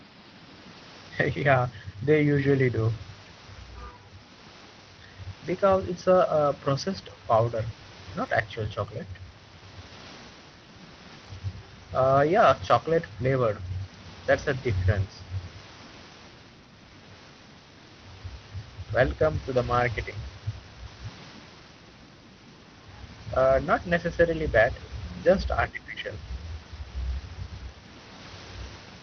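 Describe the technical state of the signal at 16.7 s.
At 16.7 s the speech comes through intact, with no dropout, glitch or other fault, only the room noise about 19 dB below the speech and the band limit of the call codec, which stops at roughly 6 kHz.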